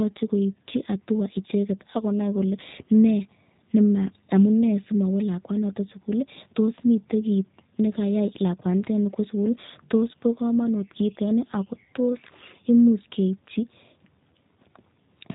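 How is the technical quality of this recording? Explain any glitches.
The recording is limited by one fault that runs for its full length: G.729 codec coding, plainly audible from start to finish. The speech is rebuilt from a short-term vocal tract filter, a pitch predictor and a sparse set of pulses per 10 ms frame, rather than being carried as a waveform. The sound points to the G.729A variant at 8 kbit/s. Everything above 4 kHz is gone, so the speech sounds narrowband and dull. Voiced sounds take on a rough, buzzy, slightly synthetic texture, because only a few pulses approximate the excitation in each half-frame.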